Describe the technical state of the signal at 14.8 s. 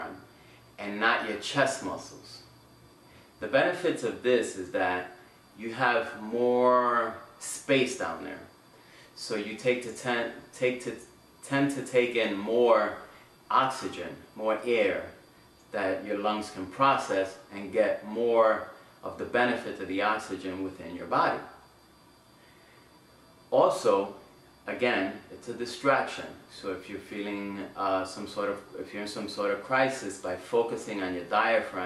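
At 14.8 s the signal is intact, with no dropout, distortion or other fault at that point.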